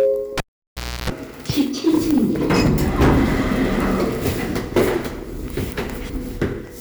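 A recording of everyday sounds, hard clipped throughout: the signal was driven about 14 dB past what a stage in the chain could pass, so peaks are sliced flat. Only a small fraction of samples hit the ceiling, but the flattened tops add high harmonics heard as harsh crackle on loud moments. At 0.38 s a cable pulled and plugged in interrupts the sound with a pop, then the signal drops for about 0.67 s, including roughly 0.31 s of 60 Hz mains buzz while only the plug tip makes contact, before a second pop at 1.10 s as the connection is restored.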